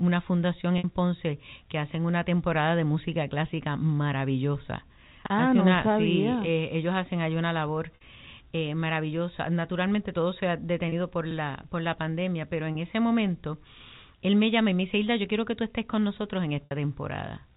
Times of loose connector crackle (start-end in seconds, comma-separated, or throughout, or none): none